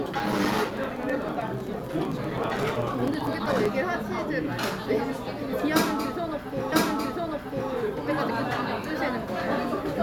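From 0.07 to 3.66 s, regular ticks sound every 64 ms, each a gap of about 4 ms of silence: periodic USB or driver dropouts, with the audio path stalling at a fixed interval. At 6.71 s a small blip marks a jump back, and about one second of the sound plays again until 7.71 s, a stream segment repeated by the player.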